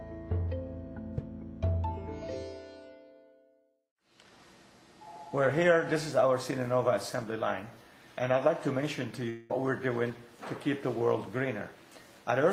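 At 9.29 s the sound stops flowing and a fading buzz or hiss takes its place until 9.51 s. This is likely a long network dropout. For about 0.2 s no audio arrived, and the receiver stretched the last sound to cover the gap. The fill never fades to silence. When the audio returns, roughly 200 ms is simply gone. The surrounding audio carries the coding noise of an Opus call path, cut off above 12 kHz.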